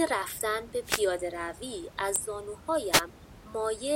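At 0.82 to 1.05 s and again at 2.91 to 3.01 s, the speech is hit by a wireless microphone noise hit. The analogue FM radio link fades briefly, likely as reflected signals cancel, and receiver noise rises over the voice as a quick swish of static. On a spectrogram each burst shows as a broadband vertical smear. On the waveform the floor thickens above the steady room noise, which otherwise sits about 21 dB below the speech.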